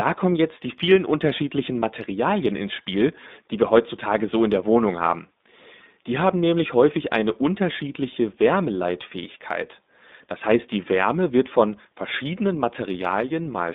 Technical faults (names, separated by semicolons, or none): iLBC codec